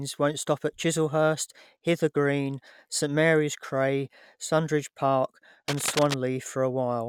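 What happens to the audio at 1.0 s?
Nothing goes wrong at 1.0 s; the speech runs on intact through that moment, with no dropout, click or other fault.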